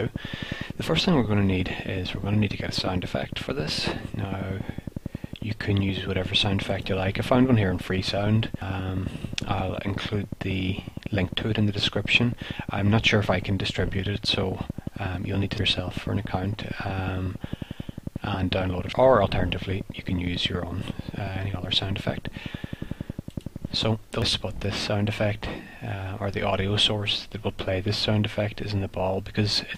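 Something, likely electrical interference or a faulty connection or power supply, injects a regular train of clicks at 11 per second from 0.07 to 23.84 s, ticking over the audio, including pauses, and peaking roughly 10 dB above it. Damaged data in the compressed stream makes the decoder lose frame sync at 8.62, 15.58, 18.93 and 24.22 s, each time producing a brief chirp, squawk, click or short hole.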